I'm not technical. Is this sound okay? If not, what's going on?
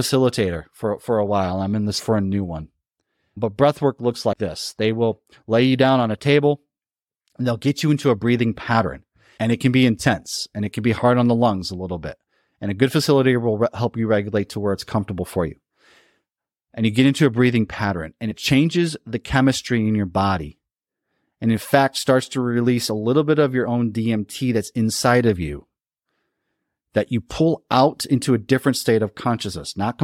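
No. There is damaged data in a compressed stream, heard as two brief glitches at 4.32 seconds and from 18.30 to 18.32 seconds. Parts of the compressed file were corrupted, so the decoder misread those bits and had to find its place again.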